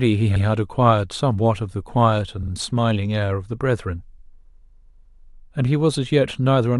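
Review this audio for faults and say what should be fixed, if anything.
A stutter at 0.35 s replays a 92.9 ms stretch of speech once, and at 2.42 s a 46.4 ms stretch plays twice more. These are repeated frames: a run of compressed frames, which fits four and then two frames, was written or sent again, so the decoder played it repeatedly, each event adding 92.9 ms. Checking frame sequence numbers or timestamps and dropping duplicates before writing or decoding would prevent it.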